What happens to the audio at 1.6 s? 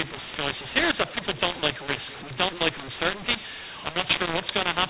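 At 1.6 s, as throughout the clip, mu-law and A-law are mixed up: mu-law telephone coding is decoded as A-law, scrambling levels, so speech sounds harsh and distorted and pauses fill with noise.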